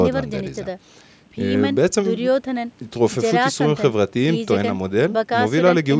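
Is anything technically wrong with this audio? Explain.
No, nothing is technically wrong with this speech.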